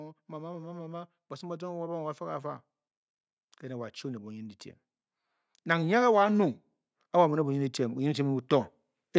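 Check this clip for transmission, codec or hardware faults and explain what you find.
Automatic gain rising occurs twice in this speech: from 0.05 to 2.64 s the AGC, finding the input too quiet, lifts level by about 6 dB, and after "a nung" from 7.12 to 8.78 s it lifts about 4 dB. Voice and background swell together. The call microphone processing limits content to 8 kHz.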